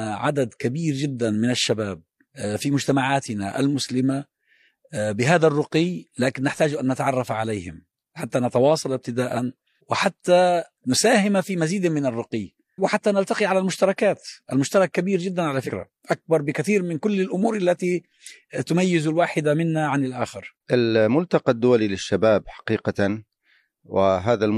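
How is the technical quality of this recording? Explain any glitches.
Two short codec glitches stand out, one near the start and one past the middle of this speech recording.

At 1.67 s there's a corrupt frame decoded: a couple of compressed frames had flipped bits, and the decoder played them anyway, so misread gains and codes throw energy into the wrong frequencies. You get a quick chirp or blip, peaking around -25 dBFS.

From 15.61 to 15.71 s, compressed frames were skipped, either missing or rejected as damaged, so the speech jumps ahead by about 50 ms.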